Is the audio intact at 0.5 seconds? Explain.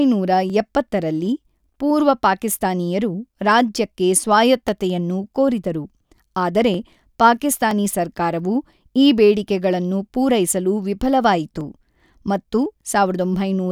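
No, not quite. Right at 0.50 s, just before "ಎಪ್ಪತ್ತರಲ್ಲಿ ಪೂರ್ವ ಪಾಕಿಸ್ತಾನೀಯರು ರಾಜ್ಯಕ್ಕೆ", there's a single sharp click that sounds like dropped samples. The likely cause is that well under a millisecond of the stream went missing, so the waveform leaps straight from one value to a later one. That gap is far too short to take out any of the speech; you just hear the tick, and on a spectrogram it's a thin vertical line.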